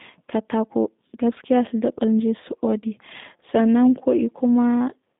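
Speech passed through a G.729 codec for its whole length, and the audio fits the 8 kbit/s G.729A variant used in VoIP telephony. The codec rebuilds each 10 ms frame from a vocal tract model, a pitch predictor and a few pulses, so the result sounds plainly rough and slightly synthetic. The band is held to roughly 150 Hz to 3.7 kHz, with nothing above 3.8 kHz, which leaves the speech thin and muffled.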